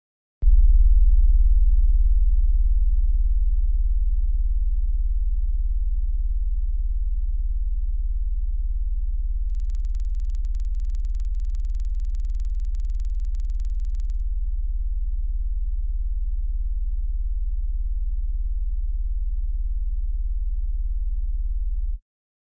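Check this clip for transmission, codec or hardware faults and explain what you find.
One fault is present: the resampler restarted on every block. From 9.5 to 14.2 s, a steady tick pattern at 20 Hz rides on the sound. Each 50 ms block was converted from 48 kHz to 16 kHz separately. The converter lacked true neighbouring samples at block edges. Each edge therefore carries a small error, heard as regular ticks only while sound is present.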